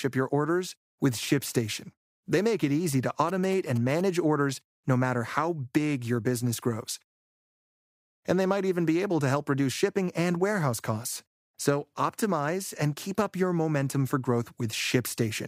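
GSM signalling bursts run from 3.29 to 4.01 s, between "make it easy to" and "orders no matter how". A nearby 2G phone's signalling bursts, rectified by the audio circuitry, produce a galloping dit-dit-dit of short 217 Hz buzzes around 15 dB below the speech.

A rebuffering stall follows at 7.28 s, after "big your business grows". The player ran out of downloaded audio and went silent for 0.91 s, then resumed exactly where it stopped, adding time without losing any.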